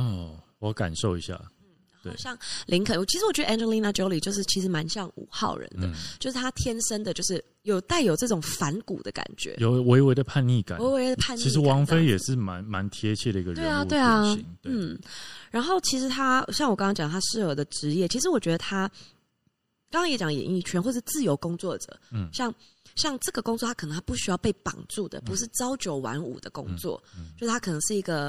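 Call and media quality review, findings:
Watery, swirly speech throughout, sibilants metallic and chirpy, treble dull, onsets smeared. Likely MP3 compression, consistent with a 64 kbps encode: encoder cuts treble at fixed frequency and bit starvation zeroes weak spectral lines, which flicker frame to frame.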